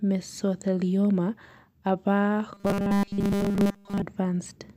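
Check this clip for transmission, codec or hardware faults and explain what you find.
One fault stands out. From 2.54 to 4.02 s the speech becomes robotic sound from repeated short buffers: a rigid, metallic 200 Hz buzz that loosely follows the words. The likely cause is a 5 ms chunk replayed almost continuously while fresh audio is skipped. The unvarying pitch of the buzz separates it from codec warble.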